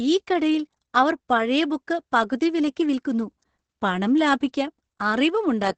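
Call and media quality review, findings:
Opus voice compression, whole clip (speech). Heavy damage: muffled, hoarse, slightly robotic timbre. Nothing above 8.9 kHz, consistent with wideband SILK at around 10 kbps with coarse excitation coding. Distinct from plain low-pass or resampling: the band edge alone wouldn't add the hoarse, buzzy texture, which comes from the codec quantising the excitation. Constant across the clip, with no dropouts or bursts, so not packet loss.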